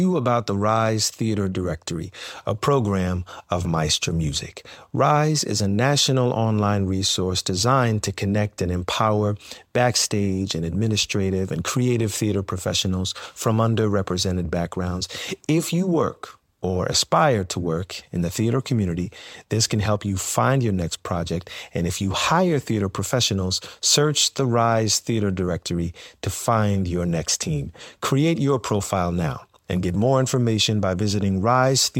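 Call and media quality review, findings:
Loud pop, 10.51–10.53 s: one sharp click a few dB above the speech, which carries on underneath. Likely a voltage spike from a switch, plug or driver glitch.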